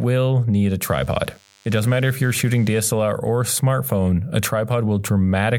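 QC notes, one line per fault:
0.91 to 2.91 s, DECT cordless phone buzz: for about two seconds a thin, steady buzz sits under the speech. It's a 100 Hz drone with a stack of harmonics, from a nearby DECT handset or base station bursting every 10 ms with the audio circuit rectifying it. Pretty faint, roughly 35 dB down.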